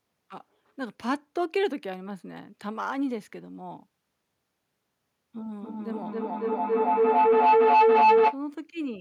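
Feedback howl runs from 5.42 to 8.41 s: sound re-entering the microphone through a nearby loudspeaker gains level each trip, narrowing to a shrill tone around 1 kHz. It pulses roughly every third of a second and peaks about 12 dB above the speech.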